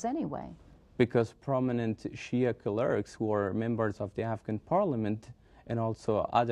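No technical faults can be heard anywhere in the clip.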